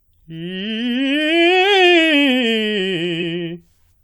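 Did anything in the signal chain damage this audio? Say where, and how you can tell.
Yes. At the codec stage, compressed frames were skipped: the decoder lost or rejected whole frames, so the music jumps ahead by about 50 ms at 3.19 to 3.23 s.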